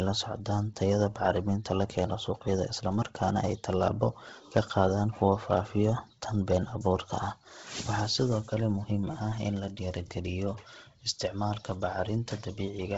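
From start to end, the speech carries heavy coding damage, most likely from Bluetooth LC3 compression. Nothing is heard above 7.8 kHz. Within that band, much of the upper detail has been thrown away and replaced by shaped noise. Consonants turn breathy and grainy, with a hissy, smeared edge. The damage is steady and evenly spread in time. Its texture fits a low rate near 16 kbps and 10 ms transform frames.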